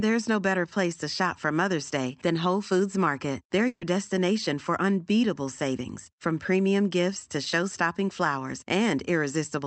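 From 3.67 to 3.83 s the speech stalls: the last sound is stretched into a held, fading tone for about 140 ms, dips briefly into silence, and then picks up at "destination for unbeatable savings" with roughly 140 ms of the original simply gone. This is a burst of packet loss on the call path, where the top end stops near 8 kHz as an Opus stream would. The receiver concealed the missing packets by extending and attenuating the previous audio before skipping ahead.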